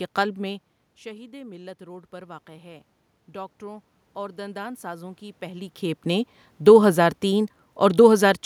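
Automatic gain rising runs from 1.04 to 5.77 s, starting just after "قلب میں" and settling by "نے دو ہزار تین". When the talker moves back around half a second in, the input level drops by about 18 dB. The gain control responds by slowly raising its gain by about 8 dB over nearly five seconds. The room noise swells upward along with the voice, and the voice only partly recovers before the talker shifts again near 5.5 s.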